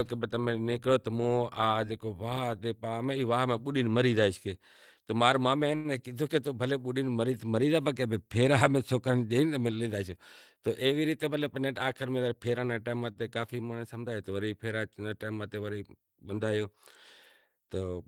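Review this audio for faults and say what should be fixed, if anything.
Short stalls from a late packet occur at 5.75 to 5.99 s and 13.12 to 13.19 s. The jitter buffer ran empty, so the receiver held the last sound for 91 ms and then 39 ms before resuming at the same place. Unlike loss concealment, nothing is skipped; a sound just lingers. A slightly deeper jitter buffer target would absorb these late arrivals.

A jitter buffer speed-up runs from 10.62 to 11.66 s. The buffer had grown too full, so the receiver cut out short pitch-period slices again and again, playing at 109% speed and dropping about a tenth of a second. The pitch stays the same, which sets it apart from a resampling speed change. Steadier packet delivery, or spreading the catch-up over a longer stretch, would make it less noticeable.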